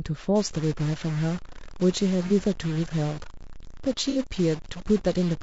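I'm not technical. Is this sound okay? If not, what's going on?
No. Throughout, the speech sounds rough and grainy, with a hiss between the tones and a dull, slightly artificial top end. The likely cause is low-delay AAC compression, the kind used in video calls, squeezing the sound too hard to save data.

From 0.36 s to the end, a distortion rides on the speech, and even the pauses fill with noise. This is likely a stuck bit: one digit in every stored sample is frozen, so many sample values come out wrong.

At 2.27 s there is a very brief smeared, noisy blip, and from 4.10 s to 4.18 s one about twice as long. This is AAC frame loss with concealment. Small chunks of data went missing, and the player guessed to fill the gaps from the sound just before.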